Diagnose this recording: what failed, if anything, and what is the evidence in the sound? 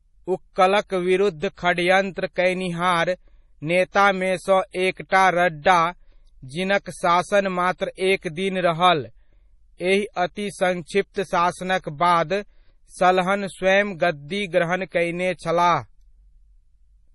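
The codec stage is where it went wrong, and it runs through the whole speech clip. Nothing survives above about 11.4 kHz, a hard treble ceiling, and the damage is heavy: the sound has that watery, swirling texture where faint detail flickers in and out. That's the signature of MP3 compression at a likely starved bitrate, which fits something around 32 kbps. The encoder is chopping the top end and dropping weak frequency lines frame by frame to stay within budget.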